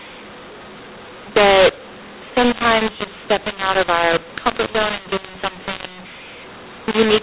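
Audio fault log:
throughout, mu-law and A-law mixed up: A-law telephone samples are decoded as mu-law, scrambling levels, so speech sounds harsh and pauses fill with noise. The waveform shows misshapen peaks and a raised floor between phrases; the spectrogram shows broadband grit up to the 4 kHz ceiling.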